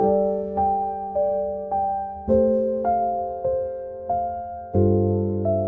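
Nothing stood out as a technical problem on listening.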